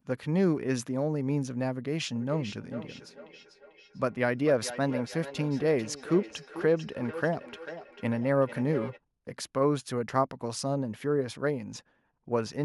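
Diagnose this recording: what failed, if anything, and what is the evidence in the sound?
Feedback echo between two devices, from 2.16 to 9.0 s, a call-processing failure: the speech returns at a steady interval of roughly 400 ms, peaking about 12 dB below the direct speech. A second device on the call replays this microphone's signal into the room, where the microphone picks it up again, and neither echo canceller removes another device's playback.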